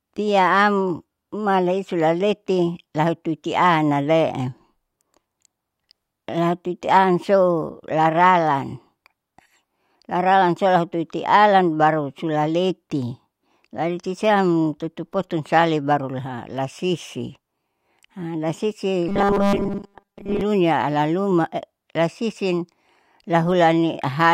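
At 19.09–20.41 s, robotic sound from repeated short buffers: a looped 5 ms chunk likely forces a metallic 200 Hz buzz, seen as rigid harmonic stripes on a spectrogram.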